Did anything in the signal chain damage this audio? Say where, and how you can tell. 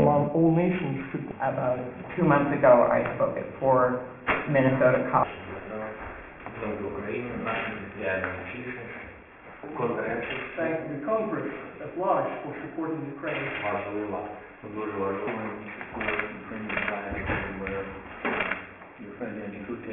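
Yes. A sample-rate conversion stage downsampled without an anti-aliasing filter, which fits a drop from 44.1 kHz to 6 kHz. Content above 3 kHz folds back as aliasing throughout, sitting roughly 15 dB below the signal, so sharp sounds turn gritty and metallic and the spectrum presses hard against the band edge.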